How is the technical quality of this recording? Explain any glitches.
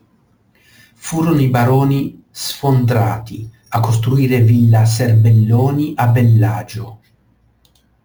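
The recording has one fault, present throughout: imaging from sample-and-hold upsampling. The speech appears to have been raised from a 16 kHz rate, which fits the conversion to 44.1 kHz, by repeating each sample with no smoothing filter. Mirrored copies of the spectrum fill the region above the original band, the first spanning 8 to 16 kHz at about 26 dB below the signal. They add a bright, metallic fizz that rises and falls with the speech. Because that lowest copy is reflected around 8 kHz, its components move down as the speech pitch moves up.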